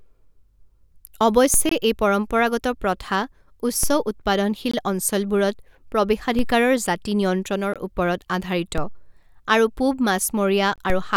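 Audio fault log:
1.54, 3.83, 6.39, 8.78, 10.9 s: DC step. The waveform's zero line jumps abruptly, then drains away through a high-pass near 2 Hz, giving a low thump each time.
1.69–1.71, 4.71–4.74, 7.74–7.76, 10.76–10.78 s: gap between chunks. A hard-edged hole about 21 ms long recurs every 3 s at chunk joins. This fits padding or a late chunk start.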